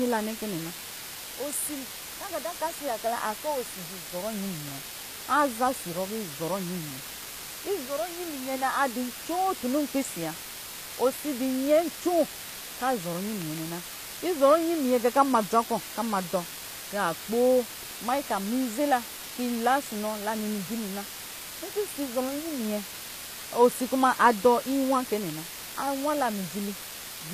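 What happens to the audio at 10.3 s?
At 10.3 s, as throughout the clip, the speech sits in a constant, even hiss from low bit depth with dither. The noise floor lies only about 10 dB under the speech, which fits roughly 5-bit quantisation with dither added before rounding, so the rounding error becomes steady white noise rather than distortion. On a spectrogram it shows as a uniform grey wash across all frequencies, and on the waveform as a thick band of fuzz even between syllables.

The upper spectrum is also damaged, and HE-AAC compression is the likely cause. The treble is rebuilt by copying lower bands upward, so s sounds come out gritty and metallic, with harmonics misaligned across the crossover. That fits a bitrate near 24 kbps. A spectrogram shows a sharp ceiling with nothing above 14.9 kHz and blocky, repeated-looking texture in the high bands.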